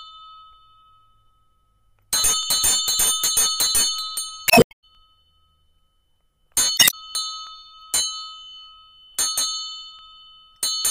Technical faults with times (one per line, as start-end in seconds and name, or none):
2.43-2.45 overlapping chunks
4.45-4.84 damaged data in a compressed stream
4.95 overlapping chunks
6.75-6.94 damaged data in a compressed stream
7.47-7.49 overlapping chunks
9.99 overlapping chunks